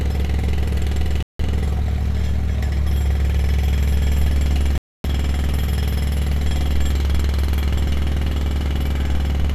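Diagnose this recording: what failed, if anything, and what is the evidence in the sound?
The failure is at the broadcast reception stage: a digital broadcast dropout, heard twice. The audio mutes from 1.23 to 1.40 s, a hole of about 170 ms. It mutes again from 4.78 to 5.05 s, about 260 ms. Each time, the sound resumes further along rather than where it stopped. The receiver lost good frames and muted until clean ones arrived. The gap lengths fit roughly seven and eleven lost 24 ms frames. The missing audio cannot be recovered.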